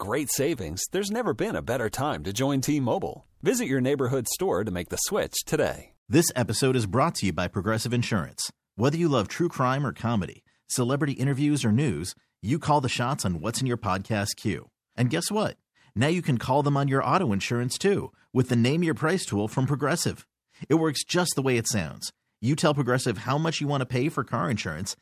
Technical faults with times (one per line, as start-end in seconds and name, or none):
none